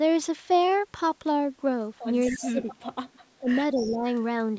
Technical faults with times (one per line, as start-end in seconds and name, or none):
2.26-3.19 echo leak
2.32-2.79 speech suppressed in double talk
3.26-4.05 speech suppressed in double talk
3.75-3.98 echo leak